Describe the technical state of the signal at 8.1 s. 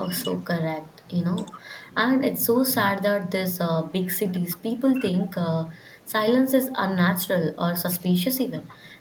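At 8.1 s the signal carries an echo leak, running from 7.92 to 8.75 s. A faint copy of the speech returns about 300 ms late, roughly 25 dB below the direct voice, most likely because a loudspeaker-side echo canceller let part of its microphone pickup slip back. On a spectrogram it appears as a weak, smeared repeat of the harmonic bands shifted 0.3 s right. In the waveform it adds a low, trailing layer under the main envelope.

Just before, from 7.98 to 8.08 s, there is speech suppressed in double talk. For about 100 ms the voice dips by as much as 20 dB, likely because the echo canceller could not separate the talker from the returning echo and attenuated both. In the waveform this is a sudden notch in the amplitude envelope. On a spectrogram the bands fade briefly. By 8.1 s the level has just recovered.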